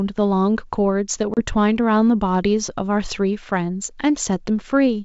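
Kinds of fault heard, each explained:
Packet loss on an ADPCM call: a few packets drop out around 1.34 s, leaving a hard-edged 30 ms hole of silence. Because the decoder's predictor and step size lose track of the sender's, the speech comes back slightly distorted, settling by about 1.40 s.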